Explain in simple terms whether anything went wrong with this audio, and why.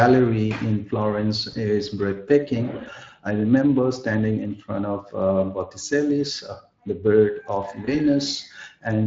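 Yes, two things went wrong. Throughout the whole clip, the speech has a rough, hoarse, noisy graininess. This is Speex codec damage. Speex is an older speech codec used in internet calls and game chat, and here it didn't have enough data to rebuild the voice cleanly.

At 1.51 to 1.56 s and again at 7.85 to 7.96 s, the speech briefly gets stretched out and then fades, and the voice stays weak for a moment afterward. This is VoIP packet loss concealed by the speech codec. Each glitch fits about 20 ms of missing audio. The decoder covered each gap by stretching out the last sound it had, and it took a short while to recover.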